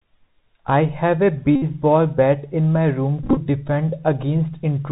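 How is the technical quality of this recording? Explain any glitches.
The technical quality is poor. The whole recording passes through a narrowband Bluetooth headset link with clearly audible codec damage, and two stretches of speech break into a mechanical buzz.

The Bluetooth CVSD headset codec is active throughout. CVSD encodes each sample at 64 kHz as a single up-or-down bit and adapts its step size, so nothing above 4 kHz survives. Loud, fast-rising sounds outrun the step and distort, s sounds come out scratchy, and a grainy hiss sits under the speech. That granular noise and overload roughness set it apart from a clean telephone band-limit, which is muffled but smooth.

A Bluetooth headset packet repeated fault occurs twice. From 1.56 to 1.63 s, about 64 ms of audio was lost, and the headset filled the gap by decoding the previous packet's bits again and again. Repeating a 3.75 ms packet produces a steady buzz near 267 Hz rather than silence. 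A plain dropout would leave a hole, and smooth concealment would smear the sound, but here the gap becomes a tonal drone.

The second event, from 3.23 to 3.38 s, is patchier. About 79 ms of audio is missing, scattered over 135 ms, with the longest unbroken run around 20 ms. Instead of one continuous buzz, the speech is chopped by short bursts of the same 267 Hz repetition and ticks, with good packets briefly returning in between.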